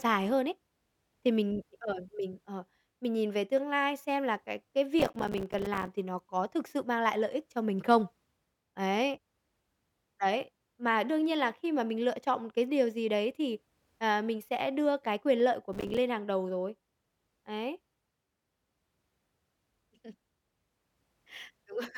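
From 5.0 to 5.93 s, between "xem là cái cái" and "thì nó có thực", the speech breaks into processor overload crackle. The processor repeatedly fails to deliver its short audio buffers in time, and each miss drops a silent gap with hard edges. The rapid dropouts suggest buffers of around 5 ms, and they merge into a gritty tearing. A shorter burst follows at 15.73 to 15.98 s, after "cái quyền lợi của" and before "hàng đầu rồi".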